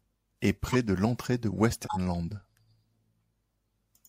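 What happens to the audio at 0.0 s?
Nothing goes wrong at 0.0 s; the audio is clean, with no dropout, click or other fault at that point.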